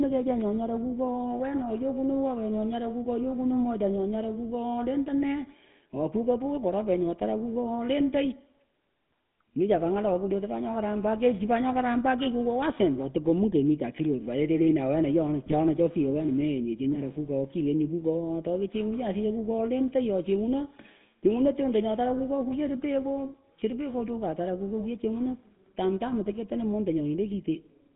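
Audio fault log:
throughout GSM full-rate codec: the speech has passed through the original 13 kbps GSM coder, which rebuilds each stretch from a vocal-tract filter excited by a sparse, regular pulse train. The line passes roughly 150 Hz to 3.7 kHz, leaving the voice band-limited, buzzy and plainly gravelly.
15.46 to 15.55 s GSM bit errors: corrupted bits reached the decoder over about 90 ms, spoiling the filter, pitch and gain parameters for a few consecutive frames. The spectrum and level lurch out of control, so the speech briefly breaks into a squawking, gargling burst.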